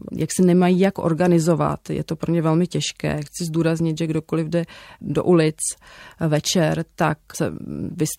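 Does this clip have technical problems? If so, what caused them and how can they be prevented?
Yes. Compressed frames were skipped at 7.34 s, just after "večer tak". About 20 ms of speech is missing, roughly one frame. The frame length points to 23.2 ms, which fits a 1024-sample frame at 44.1 kHz. The speech jumps forward at that point. The cause is a frame that was lost or rejected as damaged during decoding. Verifying file integrity after transfer, and using error-checked storage and delivery, would prevent it.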